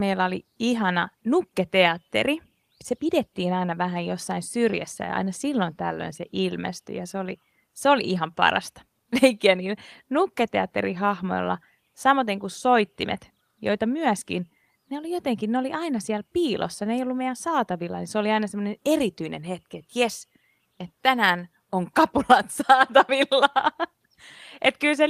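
No technical faults can be heard anywhere in this speech recording. At no point does anything in the signal go wrong.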